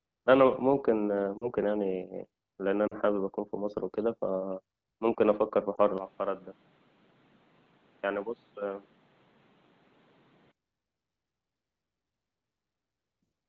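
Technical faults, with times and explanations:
1.38–1.49 s, 2.87–2.95 s and 5.76–5.80 s: lost AMR speech frames. The speech briefly smears and dips at each point, then recovers. The first two gaps last about 40 ms, which fits two lost 20 ms frames. The third is shorter and fits one. Corrupted frames failed their check, so the decoder repeated its last good pitch and vocal tract settings at lower gain. That gives a short dip or warble instead of a clean gap. The AMR wideband (HD Voice) coding around these gaps is clear, with only light coding roughness.
5.98–10.52 s: input switched to a poorer device. The sound suddenly turns duller and boxier, with nothing above 4.5 kHz. It also drops about 5 dB in level. New background noise sits roughly 30 dB below the speech. There is no silence at the switch, and the band returns to full width at 10.52 s. This is likely the system changing to another microphone or a headset's call profile, which passes a narrower band and adds its own noise and tone.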